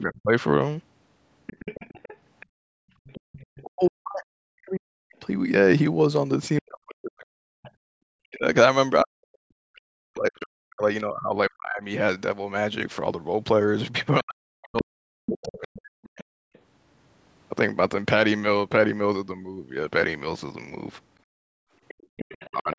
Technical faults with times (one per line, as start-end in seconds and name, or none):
0.00-3.88 other side's voice leaking through
0.04-0.32 speech suppressed in double talk
2.46-3.32 background gated by the echo canceller
3.62-16.31 speech suppressed in double talk
7.25-7.71 other side's voice leaking through
7.81-8.04 background gated by the echo canceller
15.42-16.59 other side's voice leaking through
21.24-22.17 background gated by the echo canceller
21.88-22.75 other side's voice leaking through
22.52-22.78 speech suppressed in double talk